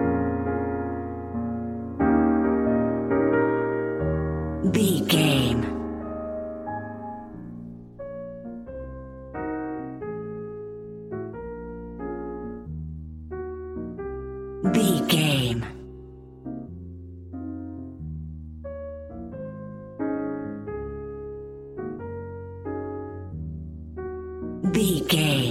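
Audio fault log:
No technical faults can be heard at any point; the signal holds steady and continuous throughout.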